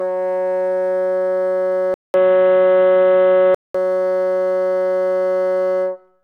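The input likely switched to a poorer device at 1.94 s, after about 200 ms of silence. Until 3.75 s the music passes a narrower band, sounds dull and boxy, shifts level by a few dB, and carries a faint new background noise.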